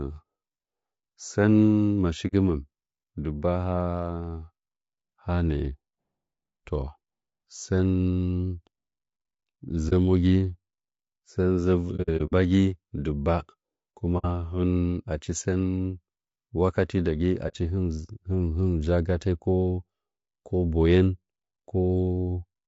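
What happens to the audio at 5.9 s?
At 5.9 s the speech is rough and grainy, as throughout, likely from low-delay AAC compression at a low bitrate; a spectrogram would show smeared harmonics with noise filling the gaps between them.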